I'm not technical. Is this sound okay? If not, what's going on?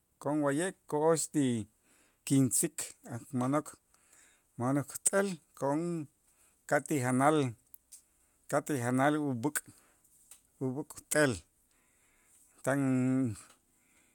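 Yes, this recording is fine; there's nothing wrong with it that you'd need to worry about.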